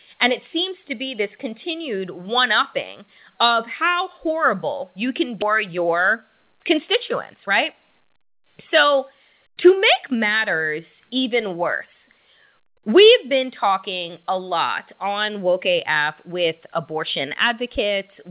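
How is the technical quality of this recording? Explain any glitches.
The recording passed through a call path whose G.711 A-law coding at 64 kbps leaves nothing above 4 kHz. It carries two kinds of timing fault.

At 5.42 to 5.44 s, just after "how horrible you can", there is a skip ahead. Roughly 0.7 s of audio was discarded, either lost in transit or dumped by an overflowing jitter buffer while later audio was already queued. Nothing fills the hole, so the speech on either side is butted together and the sentence seems to leap forward abruptly, with a chunk of it simply absent.

Two stretches of jitter buffer speed-up follow: 5.68 to 6.60 s at 109% speed, and 7.34 to 9.33 s at 110%, ending just before "to make matters even". The buffer held more audio than its target, so the receiver repeatedly cut out tiny slices one or a few pitch periods long, about 0.1 s in total in the first stretch and about 0.2 s in the second. 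Pitch stays the same, but the talker sounds briefly rushed, as if speaking slightly too quickly.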